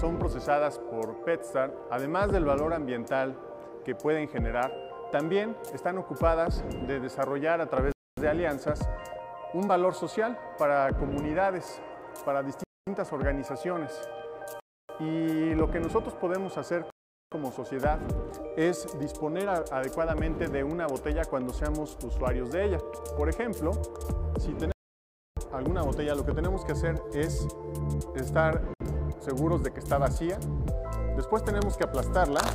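Starting at 7.92 s, the sound keeps freezing into short silences and then carrying on: 7.92 to 8.18 s (about a quarter second), 12.64 to 12.87 s, 14.60 to 14.89 s, 16.90 to 17.32 s (the longest, around 0.42 s), and later a brief 64 ms catch at 28.74 to 28.81 s. That's most likely a Bluetooth stall: interference held packets up, the headphones' buffer emptied, and playback sat waiting for the resends.

The 24.72 to 25.37 s gap is different. It's a clean cut to dead silence lasting about 0.65 s, with no room tone underneath, and the sound comes back mid-flow, so whatever happened in that stretch is simply gone. That points to an audio dropout to silence, likely from the input briefly disconnecting or muting while the recorder kept writing silence.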